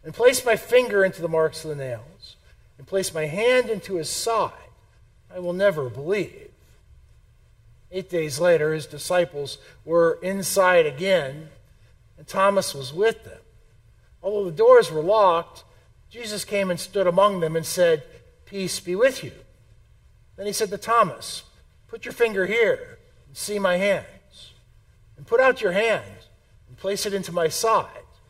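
No faults to report anywhere in the audio.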